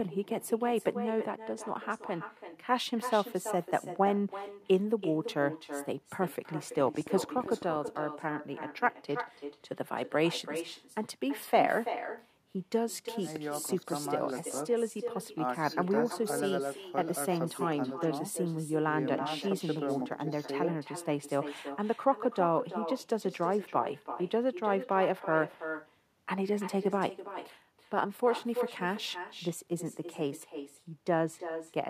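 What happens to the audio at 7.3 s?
At 7.3 s the speech sits inside a train of clicks running from 6.77 to 7.89 s: roughly twenty sharp, similar-shaped pulses at about 15 per second, spaced unevenly, some poking a few decibels above the speech. The likely source is interference from nearby equipment or a faulty connection or power supply injecting pulses. Unlike random crackle, the clicks share one shape, and unlike dropouts, nothing is missing; sound is added on top.

Throughout, including this moment, there is echo with no canceller. The far end's loudspeaker is picked up by its microphone and sent back, so each phrase returns about a third of a second later, about 10 dB quieter and thinner. Room reverberation would smear continuously from the instant of speaking. This is a distinct, delayed repeat of the speech.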